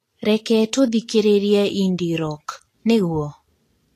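Throughout the speech, treble detail is replaced by grainy hiss with nothing above 14.2 kHz, likely Vorbis compression near 33 kbps; unlike steady background hiss, the noise follows the speech.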